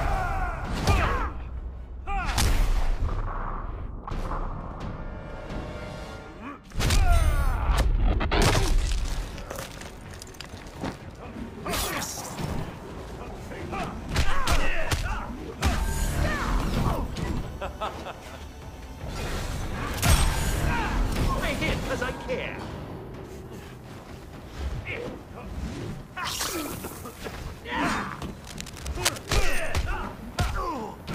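A worn cable or connector was likely moved from 28.44 to 29.67 s, so cable scratch noise adds uneven scratching bursts roughly 10 dB below the sound.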